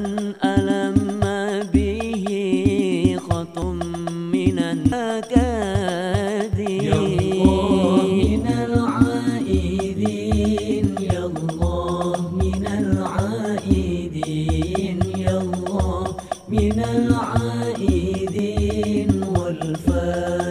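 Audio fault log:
3.62 s, 4.92 s and 18.39 s: dropped buffer (overrun). Samples were likely overwritten before the program read them, so stretches vanish, roughly a third of a second at the first two and about a tenth at the last. The edges join directly and the sound jumps ahead.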